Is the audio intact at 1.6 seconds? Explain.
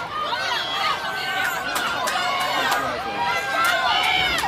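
No, at 1.60 s about 10 ms of audio goes missing and the sound jumps ahead, most likely a dropped buffer (overrun) that got overwritten before being read.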